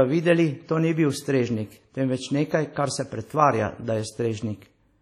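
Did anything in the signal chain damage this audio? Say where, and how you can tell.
Yes. Throughout the speech there is a washy, ringing smear with hiss that rises and falls with the signal, and nothing above 15 kHz. This is likely heavy WMA compression at a low bitrate, about 32 kbps, where long transform blocks spread quantisation noise and zero weak components.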